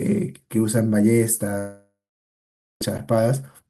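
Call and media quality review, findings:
Long network dropout, 1.58 to 2.82 s: speech cuts out, trailing buzz/hiss decays, then about 0.85 s of silence before speech resumes with roughly 1.2 s lost. Likely packet-loss concealment stretching the last frame. Spectrogram: smeared fading band, then blank; waveform flat.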